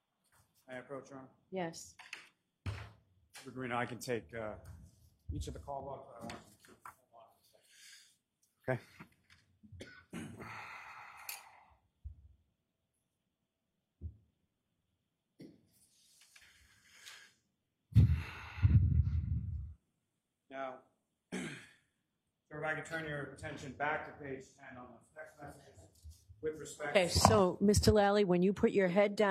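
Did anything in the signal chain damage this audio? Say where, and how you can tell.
Yes. There's overlap between stream segments at the network and stream-assembly stage. You hear a tiny skip at 1.81, 5.80, 21.77 and 25.75 s, each losing roughly 30 to 40 ms. The spacing in multiples of about 4 seconds, matching 4-second segments, gives it away. Neighbouring segments' timestamps claim a shared stretch, so the player trims it as a duplicate, but that audio wasn't actually doubled, and the waveform jumps across the gap.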